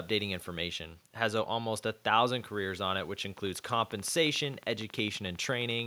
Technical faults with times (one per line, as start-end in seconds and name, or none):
3.38-5.80 train of clicks